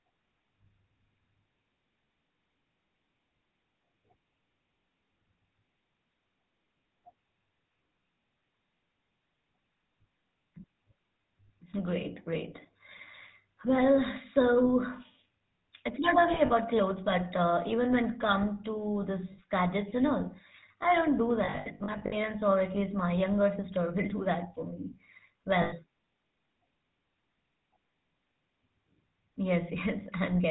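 Throughout, the speech has the buzzy, gravelly roughness of the GSM full-rate codec at 13 kbps. Its pulse-driven vocal-tract model passes nothing above 4 kHz.

Lost GSM frames hit at 16.34 to 16.51 s, 19.32 to 19.41 s, 21.44 to 22.16 s and 25.62 to 25.74 s. The last good frame repeats as a metallic ring. The worst loss, about 400 ms in short bursts, is at 21.44 s.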